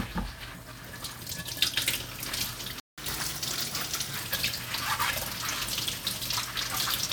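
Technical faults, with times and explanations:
2.80–2.98 s, playback stall: the sound cuts to silence for about 180 ms. The player likely ran short of data, then resumed where it stopped.
2.98–4.17 s, catch-up at higher speed: the backlog plays 1.15 times faster, lifting pitch about two semitones, until lost time is regained and normal speed returns.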